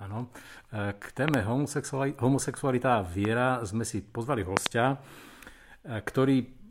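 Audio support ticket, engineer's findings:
Loud pop at 1.28–1.36 s (double, about 20 dB above speech), 3.25–3.27 s after "homosexualita a" (single, about 10 dB), 4.57–4.68 s (double, about 25 dB). Speech continues underneath. Likely cause: voltage transient from a connector, switch, static or driver glitch, shaped by downstream circuitry.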